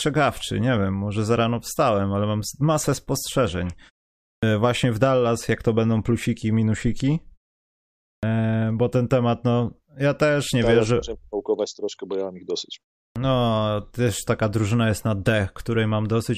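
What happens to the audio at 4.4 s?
At 4.36 to 4.43 s there is a clipped start after a pause: following a 0.54 s silence, the waking output swallows about 66 ms, so speech begins abruptly without its opening sounds, unlike a muted pause, where nothing is lost.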